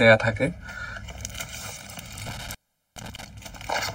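From the start, channel delay (comb filtering) gives the sound a hollow, phasey colour. One channel trails the other by roughly one and a half milliseconds, and summing them to mono cancels shared content at evenly spaced frequencies, the first notch near 400 Hz. Unlike a sweeping phaser, these notches stay fixed. Between 2.26 and 3.24 s an intermittent contact interrupts the signal: a loose connection opens for 420 ms, and the sound drops out with crackle at both edges, leaving faint hiss. That crackle separates it from a clean digital dropout, which falls silent without noise.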